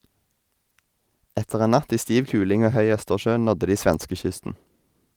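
No technical faults are audible.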